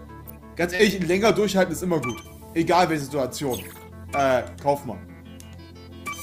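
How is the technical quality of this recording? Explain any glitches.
There is one audible glitch, a short concealed packet loss at 0.75 to 0.81 s. About 40 ms of audio never arrived in time. The receiver filled roughly 35 ms by extending the preceding sound, then blended back. It comes across as a brief smear or wobble.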